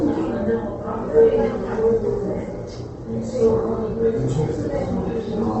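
Opus compression damage runs through the whole clip. The sound is grainy and rough. Tones come out noisy instead of clean. Nothing is present above about 8.2 kHz, so the top end is dull and closed in. The likely cause is Opus in its music mode, starved of bits. It keeps the energy in each band but fills missing detail with folded or noise-like content. The damage is plainly audible and fits a rate near 16 kbps.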